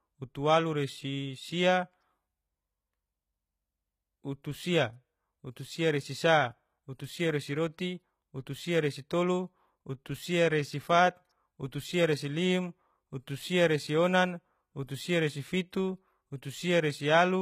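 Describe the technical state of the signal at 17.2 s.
At 17.2 s you're still hearing the same HE-AAC compression damage that runs through the whole speech clip, and it's plainly audible. The upper band sounds likely rebuilt by spectral band replication: lower frequencies copied up and shaped with a rough envelope, which fits a bitrate around 20 kbps. That borrowed treble doesn't line up harmonically with what's below, so sibilants come out gritty and a bit metallic, and there's nothing at all above about 14.9 kHz.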